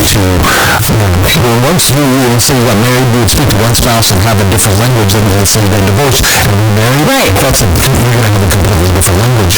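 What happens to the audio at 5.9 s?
At 5.9 s the speech carries the float-read-as-integer fault that runs through the whole clip. The samples were likely written as 32-bit float and read back as 32-bit integers. That squares the waveform at an almost fixed, high level, so it sounds loud and harsh, with background noise as strong as the speech.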